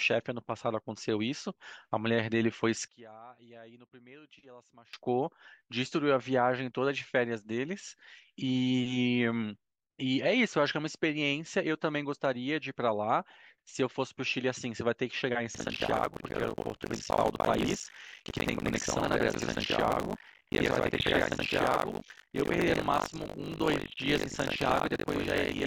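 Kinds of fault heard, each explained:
One channel inverted: From 2.88 to 4.93 s the speech suddenly drops by about 24 dB to a faint copy. That's the likely result of one stereo channel flipping polarity, so the centred voice cancels when the channels are summed.
Buffer tearing: From 15.54 s right through to the end there's a steady robotic buzz at 50 Hz riding on the speech. The writer and reader of the playback buffer have drifted so about half of each period replays audio from around 70 ms earlier, with hard splices at each join.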